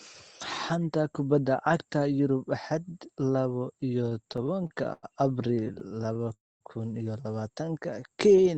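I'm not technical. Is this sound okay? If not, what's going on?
No. There is repeated stalling (stutter) from 4.09 to 5.05 s and again from 5.43 to 6.32 s. The call's audio arrived in bursts that came too late, so the receiver kept running dry and stretching the last sound to cover each short wait. Nothing is lost, but the speech drags and hiccups more than a dozen times in each stretch, with the longest pause about 100 ms.

Right after that, a call audio freeze runs from 6.34 to 6.63 s. The audio halts and drops to near silence for roughly a quarter of a second before resuming where it stopped. This is likely a brief holdup in the connection that emptied the receiver's small waiting reserve.

A jitter buffer slow-down follows from 7.65 to 8.11 s. To rebuild that reserve, the receiver repeated tiny slices of sound, so the speech plays at about 90% speed at normal pitch and sounds slightly drawn out.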